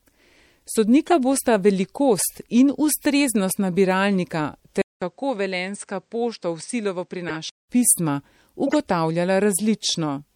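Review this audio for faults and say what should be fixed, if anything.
The whole clip has a watery, swirly quality, with smeared consonant edges and a metallic fizz on the s sounds. That's likely MP3 compression at a low bitrate, something like 64 kbps for speech. The encoder runs short of bits, drops the weaker frequency lines and lets them flicker on and off from frame to frame, and the damage is plainly audible. To prevent it, record or export at a higher bitrate, or keep a lossless master.

There are three short chirpy bursts from a corrupt frame decoded. The first is at 1.07 to 1.12 s, just before "bosta velikost in", and peaks around -10 dBFS. The second is at 7.28 to 7.36 s and the third at 8.67 to 8.78 s, both peaking around -15 dBFS. Each is a damaged compressed frame, or a short run of them, that the decoder played anyway, so energy lands at the wrong frequencies for about 50 to 110 milliseconds. 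To prevent it, use a transport with error checking so bad frames get concealed or resent.

From 4.82 to 7.69 s the sound drops about 5 dB, goes duller and boxier with nothing above 9 kHz, and picks up a low background noise about 50 dB under the signal. There's also a 200 ms gap at the switch. That's the input switched to a poorer device, most likely a fallback mic or a headset call profile with a narrower band and its own noise floor. To prevent it, lock the recording input so the system can't hop devices mid-take.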